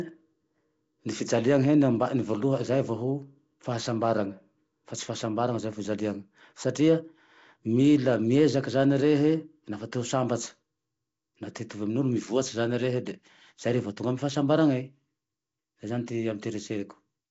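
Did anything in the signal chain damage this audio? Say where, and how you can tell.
Yes. The damage sits at the codec stage and runs through the whole clip: the speech has a rough, hissy halo and a smeared, underwater quality, with nothing above about 7.7 kHz. That pattern is likely Nellymoser compression, consistent with Flash's Nellymoser Asao at around 32 kbps. It codes short blocks at a fixed bit budget, starves weak bands and fills them with noise.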